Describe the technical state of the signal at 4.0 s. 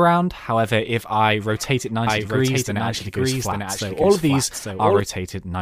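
At 4.0 s you're inside a doubled audio track that runs from 2.07 s to 5.01 s: a clean, full-band copy of the sound trails about a second behind, a few dB quieter, with no room tail. It's likely a second, slower capture path, and it drops in and out abruptly.

Right after that, at 4.03 s, there's a lost LE Audio frame, roughly 10 ms. The LC3 decoder patched it by reusing the previous spectrum with scrambled signs, so that instant comes out as a brief noisy smear.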